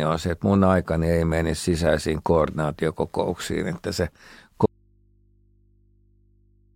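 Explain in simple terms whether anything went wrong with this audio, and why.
Something in the recording path most likely lost the signal partway through while the rest of the chain stayed switched on. That is an audio dropout to a faint residue. Right after "sisäisiin koordinaatiokokouksiin että se", at 4.66 s, the speech cuts off abruptly instead of pausing or fading. From there to the end, all that remains is a low mains hum coming from the open input, far quieter than the speech was.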